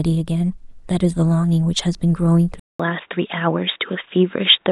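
Input likely switched to a poorer device at 2.60 s: after a 200 ms silence, speech turns dull and boxy, its narrower band stopping at 3.8 kHz.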